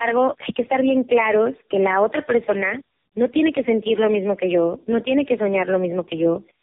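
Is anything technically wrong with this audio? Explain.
Yes. Tandem speech coding runs throughout. The speech went through about three low-rate codecs in a row, each recoding the last one's damage. It sounds rough, warbly and muffled, with nothing above 3.7 kHz.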